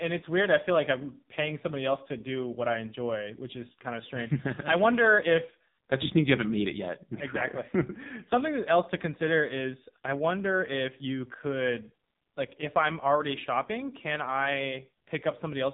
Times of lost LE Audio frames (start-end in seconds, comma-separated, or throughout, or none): none